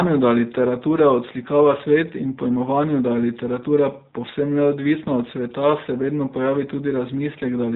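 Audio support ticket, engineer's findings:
Rough, slightly synthetic speech for the whole clip. Nothing above 4 kHz. Probable component: G.729 codec in the voice path, consistent with an 8 kbit/s setting. The speech is rebuilt from a vocal tract filter, pitch predictor and sparse pulses per 10 ms frame. Damage plainly audible.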